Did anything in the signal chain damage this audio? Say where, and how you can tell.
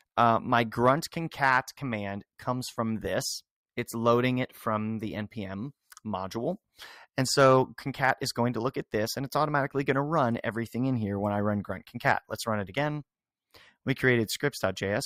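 No, nothing stood out on listening that would point to damage at any stage of the signal chain.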